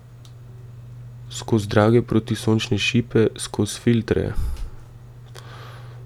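No technical faults are audible anywhere in this speech.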